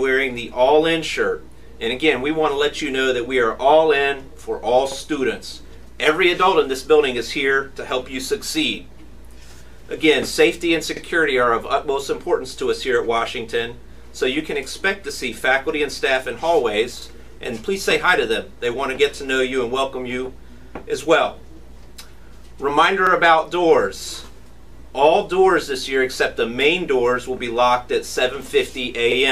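A brief stutter, a click with a sliver of sound played twice, recurs at steady intervals: at 4.92, 10.97, 17.02, 23.07 and 29.12 s. Each lasts about 50 ms. This is overlapping chunks. The audio was handled in blocks of about 6 s, and each block began about 50 ms before the previous one finished. At every join that overlap is heard a second time, which gives the regular, clock-like hiccup.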